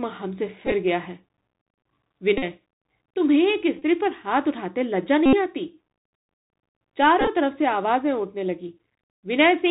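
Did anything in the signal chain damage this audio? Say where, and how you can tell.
Yes. The whole clip sounds muffled and narrow, with nothing above about 4 kHz, a granular hiss under the speech, and s sounds that come out scratchy, while louder bright passages smear and distort. This is the Bluetooth CVSD headset codec, damage introduced at the codec stage. CVSD sends one bit per sample at 64 kHz to say whether the waveform should step up or down, adapting the step size as it goes. That matches a 64 kbps link. Fast, loud high-frequency movement outruns the step, causing the distortion, and the constant up-down hunting leaves the hiss.

Five brief buzzy breakups point to Bluetooth headset packet repeats on the wireless link between headset and phone. They occur at 0.67–0.72 s, 2.38–2.44 s, 3.79–3.82 s, 5.26–5.34 s and 7.21–7.28 s. The longest, at 5.26 s, covers about 71 ms of lost audio and turns into a steady buzz near 267 Hz. 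That pitch comes from the chip replaying the last good packet's bits every 3.75 ms until fresh packets arrive. At 0.67 s and 7.21 s the losses are scattered, with runs of only about 10 to 15 ms.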